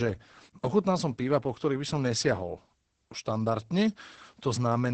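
From start to finish the speech sounds muffled, hoarse and faintly robotic, with nothing above about 8.8 kHz. This is Opus voice compression. The codec is running in its SILK linear-prediction mode at wideband, which drops everything above roughly 8 kHz. The heavy damage points to a starved bitrate, around 10 kbps. At that rate the excitation driving the predictor is coded too coarsely, making the voice hoarse.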